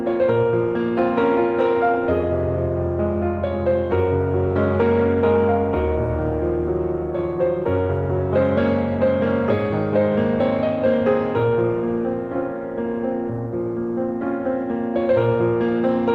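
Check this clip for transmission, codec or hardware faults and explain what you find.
No transmission, codec or hardware faults turn up in this clip.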